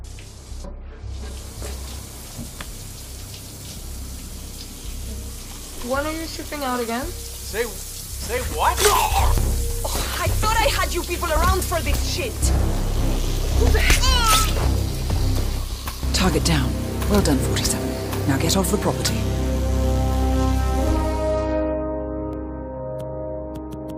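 Overlap between stream segments at 9.38, 11.37 and 22.33 s: overlapping one-second segment timestamps make the player trim real sound, so the waveform jumps, giving tiny skips.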